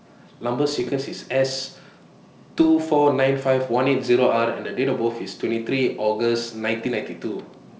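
Bit errors on an ADPCM link strike from 0.69 to 0.93 s, from 2.56 to 2.65 s, and at 6.85 s, heard as pops and rough, gritty bursts with brief jumps in level. At roughly two flipped bits per thousand, each error throws off the decoder's step size and predictor, so the disturbance rings on for some milliseconds. The G.722 wideband coding around the bursts keeps the speech clear up to 7 kHz.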